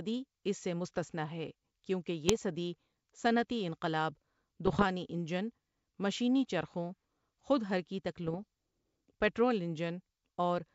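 Bit errors on an ADPCM link hit this speech three times: 2.28 to 2.41 s after "مستثنیٰ ہے کیوں کہ", 4.66 to 4.85 s before "انجن مشینی چرخوں خود", and 8.26 to 8.44 s after "مشینی چرخوں خود حرکی". The error rate is under one percent. Each flipped bit upsets the decoder's step size and predictor. The result is pops, rough bursts and brief level jumps.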